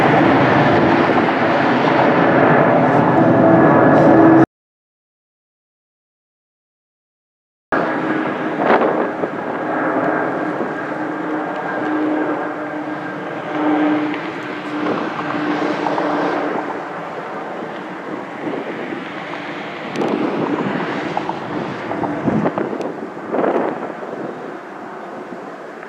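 At 4.44 s the sound cuts off into dead, roomless silence until 7.72 s, an audio dropout to silence, likely from lost input while the recorder kept writing zeros.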